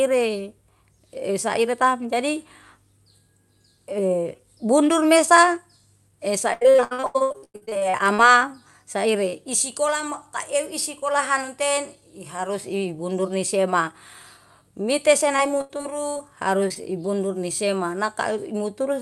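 From 6.53 to 8.20 s the speech falls into repeated packet loss, heard as a choppy, robotic stretch. The receiver keeps filling missing audio by extending what came just before, and about half of this span is that patching, with gaps up to 97 ms. A spectrogram shows the harmonics frozen into flat, smeared blocks between ragged fragments. The waveform's envelope looks chopped and uneven.

A shorter burst of repeated packet loss runs from 15.36 to 16.21 s. Here about a quarter of the span is filled in, with gaps up to 80 ms. The sound turns buzzy and broken again, and the spectrogram shows repeated, pitch-locked bands where the real detail should change.

Just after, there are two short concealed packet losses, at 16.68 to 16.72 s and 16.74 to 16.77 s. In each, about 20 ms of audio arrived too late, and the decoder bridged it with continued sound before blending back. Each is a quick smear or wobble. 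On the waveform it is a slight discontinuity, and on the spectrogram a thin, blurred vertical slice. Like the rest of the call audio, these slices sit below the 12 kHz ceiling that the Opus call path leaves on the spectrum.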